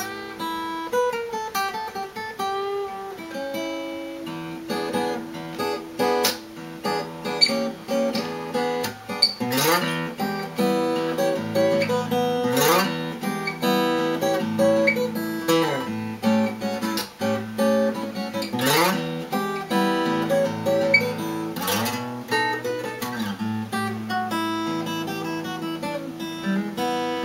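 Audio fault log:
No faults are heard anywhere in the clip. There is nothing here that calls for a time or an entry.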